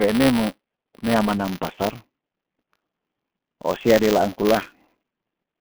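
From start to finish, the speech passes through the G.723.1 codec. Nothing above 3.4 kHz survives, and the low end thins below about 150 Hz. Consonants smear and the voice turns hoarse. The heavy damage fits a 6.3 kbit/s stream.

Buffer tearing runs through the whole clip too. A robotic buzz at 200 Hz sits on the speech, which fits a buffer period of 5 ms. In each period, a small slice of audio repeats from about 20 ms earlier. Hard joins bracket it.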